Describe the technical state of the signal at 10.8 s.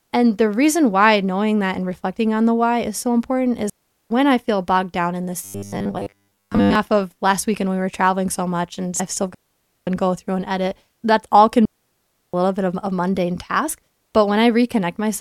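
At 10.8 s the speech signal is intact, with no audible technical fault at that moment.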